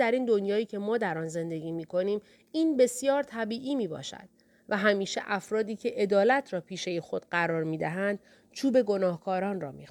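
No technical faults are audible anywhere in the recording.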